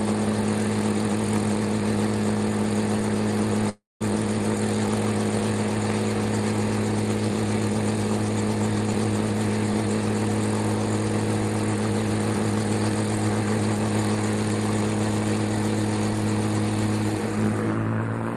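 From 3.69 to 4.02 s the audio cuts out. The last sound carries on as a fading buzz, then about 200 ms of silence follows. The audio returns with about 320 ms missing. The likely cause is a long network dropout.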